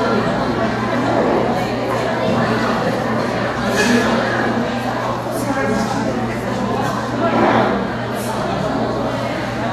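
From start to finish the sound is hissy and grainy, with roughened tones, smeared attacks and nothing above 14.2 kHz. This is plainly audible Vorbis compression, likely near 34 kbps, where the codec removes the top end and turns the remaining treble detail into noise.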